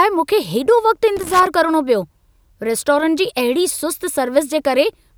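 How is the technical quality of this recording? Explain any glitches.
The recording has one glitch. From 1.17 to 1.47 s, just before "करणो पियो रेस्टोरंट जी", the speech breaks into an irregular burst of scratchy crackle. That is loose connector crackle: a worn or dirty contact in the signal path intermittently loses connection, chopping the audio on and off.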